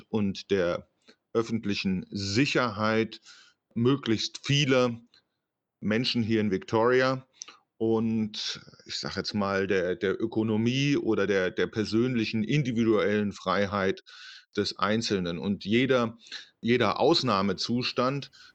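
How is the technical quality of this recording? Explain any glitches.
Nothing glitchy turns up here at all; the recording just runs along steadily with no dropouts, clicks or other technical hiccups to point out.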